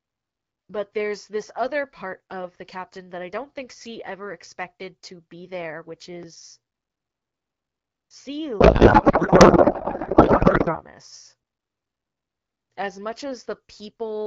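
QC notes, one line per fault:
8.59–10.83 s, codec payload misread: the speech turns to garbled, warbling noise because octet-aligned AMR-WB frames are unpacked as bandwidth-efficient, which shifts every bit field.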